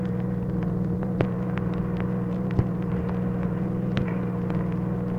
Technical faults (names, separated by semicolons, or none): none